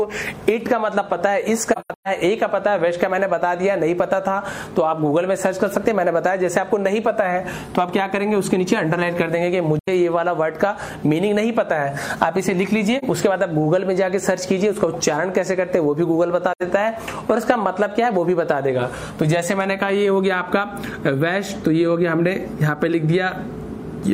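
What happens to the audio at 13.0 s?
There's a brief AAC frame loss with muting from about 12.99 to 13.04 s. A frame's worth of audio, around 43 ms, went missing, and the decoder zeroed its spectrum, so the overlapping windows fade the sound out and back in, leaving a brief dip.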